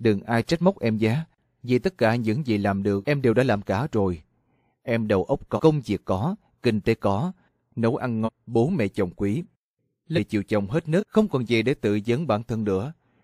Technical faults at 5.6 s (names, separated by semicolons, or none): compressed frames skipped